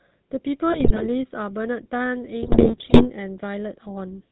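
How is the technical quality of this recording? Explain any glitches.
The technical quality is poor, with a constant codec coloration and two bursts of decoder damage.

The GSM full-rate codec is present throughout. It models the vocal tract with a filter driven by sparse, evenly spaced pulses and discards everything above 4 kHz. The speech sounds band-limited, buzzy and gravelly, in a way that fits a 13 kbps GSM stream.

GSM bit errors appear from 0.72 to 1.07 s and from 2.42 to 3.07 s. Corrupted filter, pitch and gain parameters reach the decoder, so individual frames are spectrally warped or jump in level. The speech breaks into squawks, pops and gargling, consistent with an error rate around 3%.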